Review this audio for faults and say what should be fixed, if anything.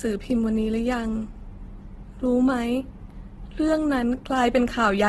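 Throughout the speech, the sound is rough, grainy and noisy, with nothing above 12.2 kHz. This is likely heavy Opus compression in its music mode at a rate that fits about 12 kbps. Starved bands get refilled with folded or noise energy instead of being left empty, so it turns gritty rather than swirling like MP3. Encoding at a higher Opus bitrate would prevent it.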